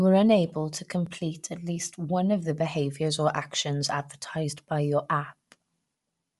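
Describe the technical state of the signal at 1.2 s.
At 1.2 s the speech is carrying what sounds like Bluetooth LC3 compression, and it runs through the whole clip. The damage is plainly audible: the top end has a breathy, grainy sheen where the upper spectrum has been thinned out and refilled with noise. The likely cause is the LE Audio transform codec working at a modest rate, which fits about 48 kbps with short 7.5 ms frames.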